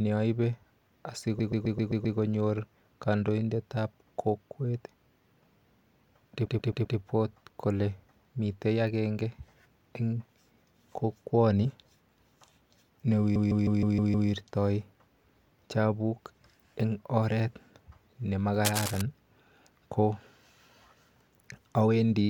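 Speech with repeated frames: stutters at 1.39–2.17 s, 6.46–6.98 s and 13.35–14.29 s, where blocks of about 131, 131 and 157 ms replay six, four and six times, lengthening the audio. From 18.65 to 19.01 s, cable scratch noise adds a burst of rough crackle only a little below the speech, likely from a worn cable or connector being moved.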